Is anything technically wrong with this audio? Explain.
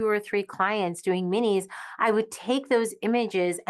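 No, the speech has passed through a WebRTC call path with an Opus codec at about 24 kbps, band-limited near 12 kHz, and nothing beyond that path's expected character is audible.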